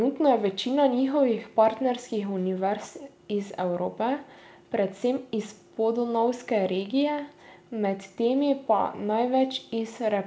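Nothing stood out on listening to the speech, which came through a G.722 call path at 64 kbps with nothing above 8 kHz.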